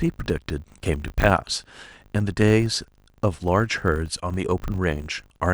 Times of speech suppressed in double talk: none

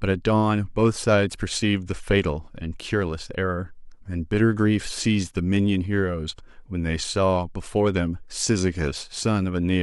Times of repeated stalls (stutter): none

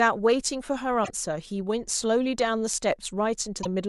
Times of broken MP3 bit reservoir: 1.03-1.10, 3.62-3.66

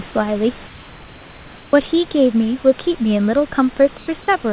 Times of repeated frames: none

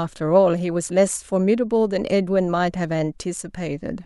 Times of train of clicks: none

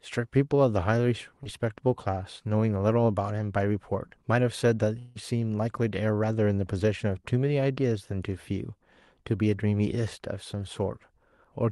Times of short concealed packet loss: 1.43-1.47

